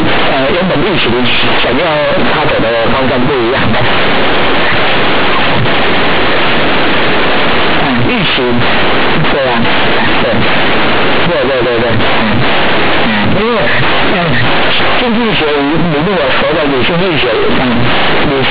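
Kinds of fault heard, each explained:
Companded audio read as linear: the speech was stored as mu-law bytes but is being played back as plain linear 8-bit samples, with no expansion step. Because mu-law puts the sign in the top bit of each byte, every sign change now jumps across roughly half the output range. Soft and loud passages come out at similar, very high levels, and the speech carries a harsh, buzzy distortion from start to finish, with loud noise filling the pauses. The band stops near 4 kHz, which fits telephone-rate coding.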